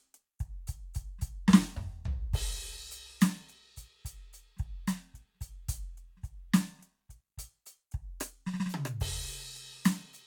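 No technical faults in this music.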